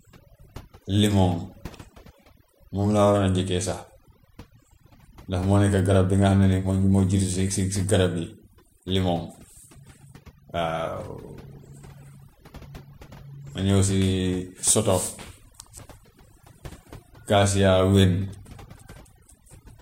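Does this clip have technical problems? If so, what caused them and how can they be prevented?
Yes: throughout, the speech sits over a near-silent, twinkling background, from overdone noise removal muting bands near the noise estimate. Prevent this by using gentler reduction settings.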